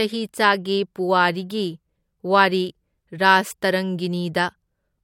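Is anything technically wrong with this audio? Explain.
Yes. Throughout the speech there is nothing above about 16.6 kHz, and the band below carries the artefacts of the earlier low-bitrate coding. This is likely low-bitrate audio saved at a high bitrate: an MP3 at around 64 kbit/s re-encoded to a 320 kbit/s MP3. The second encoding cannot rebuild the detail the first one discarded, so the larger file still has the earlier encoder's brick-wall cut-off and artefacts.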